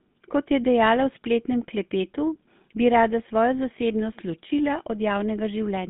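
GSM full-rate codec damage runs throughout this speech: the band stops at 150 Hz and 3.6 kHz, and the speech has a buzzy, gravelly roughness from coarse pulse-excited vocal-tract modelling, consistent with 13 kbps.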